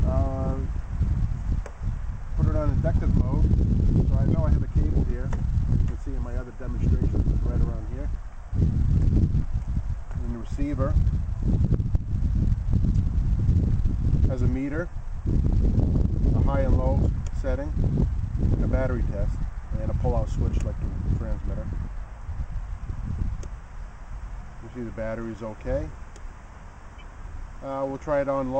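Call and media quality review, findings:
Imaging from linear upsampling, throughout. Rate raised from 24 kHz to 48 kHz by straight-line interpolation between samples, which acts as a weak anti-imaging filter. Top of the original band dulled. Mirrored spectrum copy left in the 12 kHz to 24 kHz region, roughly 55 dB below the signal, heard as metallic shimmer on bright, high-frequency content. Probable component: sample-rate converter in the media path.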